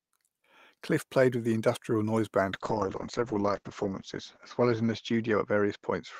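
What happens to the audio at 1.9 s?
Nothing goes wrong at 1.9 s; the speech continues intact through that moment.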